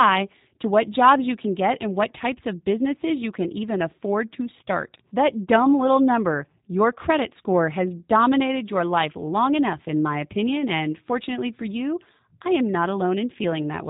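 From start to end the speech carries G.729 codec damage, plainly audible. Each 10 ms frame is rebuilt from a vocal tract model and a few pulses, which fits an 8 kbit/s stream, giving a rough, synthetic edge and nothing above 3.8 kHz.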